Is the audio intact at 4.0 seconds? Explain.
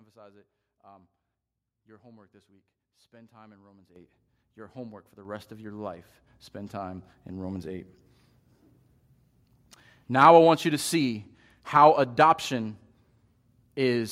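No. At 3.96 s the speech and background jump up together by about 11 dB: a microphone volume stepped up, raising the input gain in one step.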